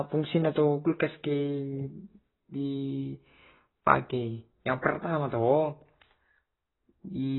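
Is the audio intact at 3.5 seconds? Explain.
No. The speech is dulled there, as throughout, with nothing above 4 kHz and a smeared, warbling texture. Heavy AAC compression is the likely cause, fitting a low bitrate around 16 kbps.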